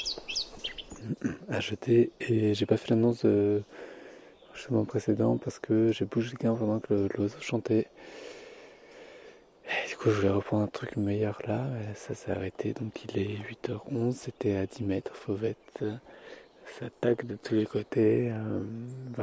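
No technical faults are audible.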